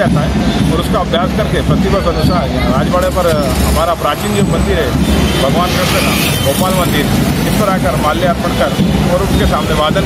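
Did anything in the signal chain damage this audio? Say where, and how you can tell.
Yes. There is gain pumping throughout the clip, most likely from input gain set far too high with a fast limiter or compressor at the capture stage clamping it back down. The gain rises in the gaps and drops by around 5 dB each time a loud sound arrives, so levels are squashed together. On a waveform the quiet stretches visibly swell between loud sounds; a spectrogram shows the noise floor brightening and dimming in step with each loud event.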